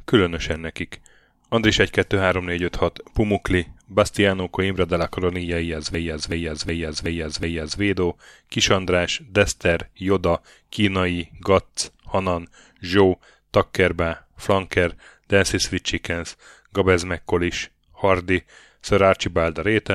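At 5.94 s the speech locks into a system hang loop that lasts until 7.80 s. A 372 ms fragment repeats exactly five times, at about 2.7 repeats per second, producing a slow, mechanical stutter rather than a buzz. The host or driver stalled while the audio hardware kept replaying its ring buffer, and the loop length fits a 16384-sample buffer. When playback resumes, the speech continues with essentially nothing missing.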